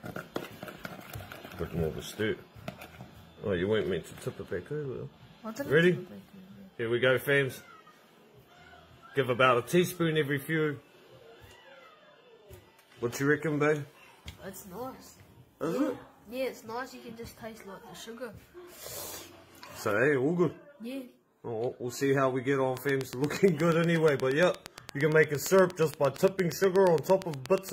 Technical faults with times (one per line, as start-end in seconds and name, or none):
22.77-27.70 train of clicks